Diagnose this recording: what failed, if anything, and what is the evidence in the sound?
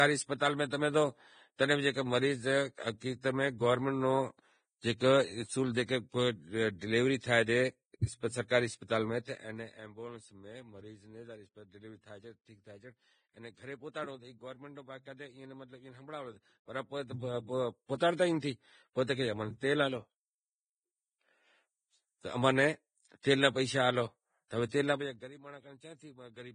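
Speech is grainy and hissy throughout, with nothing above 9.7 kHz. This heavy damage is likely codec stage, Vorbis compression, fitting about 21 kbps.

Pre-echo appears at 8.48–8.50 s, 17.98–18.00 s and 23.23 s. Codec stage. Block-spread quantisation noise puts hiss up to 25 ms before attacks.

Zipper noise rides level moves at 9.05–9.92 s, 16.26–17.73 s and 24.90–25.32 s. Call processing. Gain moves in unsmoothed 2 dB steps, each clicking.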